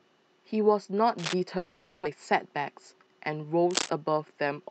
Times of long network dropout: 1.57-2.07

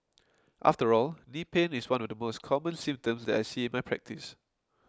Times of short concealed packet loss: none

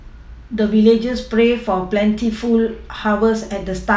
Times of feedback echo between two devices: none

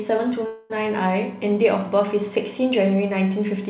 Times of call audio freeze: 0.46-0.72

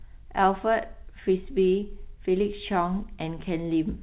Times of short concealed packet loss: 1.80-1.84

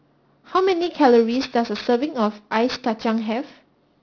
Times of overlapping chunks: none

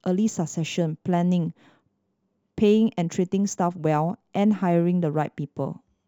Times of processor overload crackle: none

